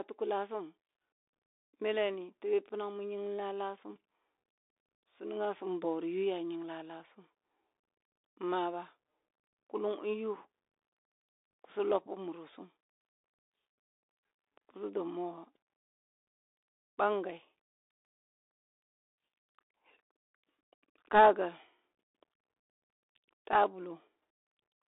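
The whole clip runs through a Bluetooth CVSD headset codec, and you can hear it from the start: the speech sits in a narrow 300 Hz to 3.7 kHz phone band with nothing above 3.8 kHz. The step-tracking coder leaves scratchy s sounds, grainy hiss underneath, and roughness on loud peaks, consistent with a 64 kbps headset link.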